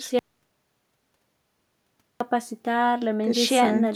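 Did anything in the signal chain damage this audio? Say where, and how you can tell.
Yes. At 0.19 s the speech drops to dead silence, not even room tone, until 2.20 s, so about 2.0 s of audio is simply gone. That's an audio dropout to silence, likely the input link or device falling away upstream while the recorder kept writing silence.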